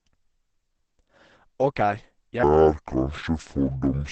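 This speech clip has likely been squeezed through Opus compression at a very low rate, which fits a bitrate around 12 kbps and the codec's SILK speech mode. The result is heavy codec damage throughout: nothing above 8.5 kHz, and a muffled, hoarse quality. From 2.43 s to the end there is a section at the wrong speed, likely from playback against the wrong clock. It runs at 0.563 times normal speed, so the sound drags slowly and drops nearly ten semitones in pitch.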